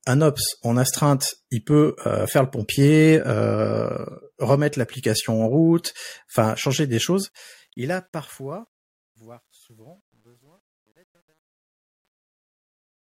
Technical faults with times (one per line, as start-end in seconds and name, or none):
7.19-13.14 truncation distortion on a fade